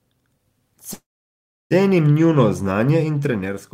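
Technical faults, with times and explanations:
0.93–1.73 s, call audio freeze: a short fading smear of the last sound gives way to about 0.69 s of silence. The speech then resumes at "njuno znanje in" intact but 0.77 s late, likely because delayed packets let the jitter buffer run empty. A spectrogram shows a brief smear, then a blank band, and the waveform goes flat.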